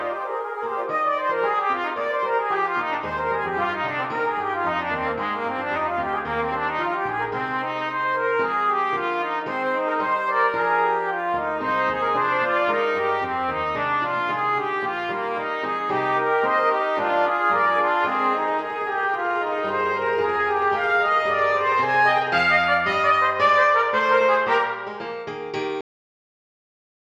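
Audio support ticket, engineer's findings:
Cut-off end at 25.81 s. Sound stops mid-event, no decay. Hard drop to digital silence for the final 1.4 s. Probable component: capture or write path at stream close. Last buffers never flushed to file or output before stop.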